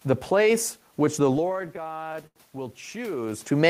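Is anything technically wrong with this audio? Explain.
Yes, there are two faults in this speech clip.

Automatic gain rising, from 1.14 s to the end: the level reaching the microphone fell by about 14 dB. The gain control judged the input too quiet and turned itself up gradually to compensate. Because it raises everything at once, the voice and the room noise swell together over the following seconds.

Repeated stalls (stutter), between 1.37 s and 2.38 s: audio arrived late or more slowly than it was played, so the jitter buffer ran dry over and over, a dozen or so times in that second. At each stall the receiver stretched the last sound to bridge the wait, fading it in the longest gap of 90 ms. About 0.2 s was filled this way, roughly a fifth of the span, and nothing was lost. The speech drags and stutters rather than dropping out.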